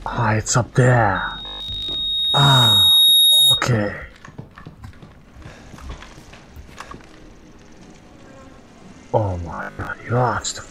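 A single tone at 3.7 kHz rises out of the audio at 1.15 s, swelling over about two seconds into a loudspeaker feedback squeal that sits about 10 dB above the underlying sound before it stops at 3.67 s. That is acoustic feedback: a microphone was picking up a loudspeaker it was feeding, and at 3.7 kHz the loop gain went above one, so that frequency fed on itself. Inside that stretch, from 1.38 to 1.94 s, and again from 9.55 to 9.93 s, the audio turns into a rigid, metallic buzz at 50 Hz that only roughly tracks the underlying sound. This is robotic sound from repeated short buffers. The likely cause is new audio arriving too seldom, so that a short piece of recent audio was replayed to fill the gaps and around 70 percent of what is heard is repeated. A 50 Hz buzz fits a repeated segment of about 20 ms.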